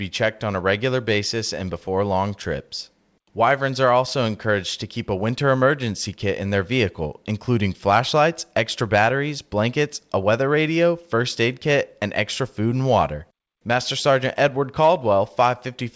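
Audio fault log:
5.46–6.19 s, scattered short gaps: about four packets were lost or late, so the receiver extended the preceding sound across each, leaving brief ticks and smears, none longer than roughly 10 ms.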